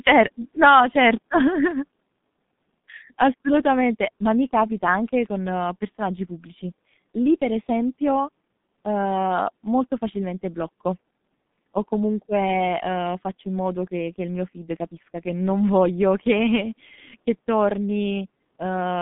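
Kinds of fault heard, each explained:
G.723.1 codec: The speech sounds muffled, hoarse and grainy, with consonants smeared together and nothing audible above 3.8 kHz. The low end thins out below about 150 Hz, leaving a narrow telephone band. The damage is heavy. This early internet-telephony codec encodes speech in 30 ms frames and refreshes its model of the voice only slowly, so fast articulation blurs. The coarse, buzzy texture fits a bitrate of roughly 6 kbit/s.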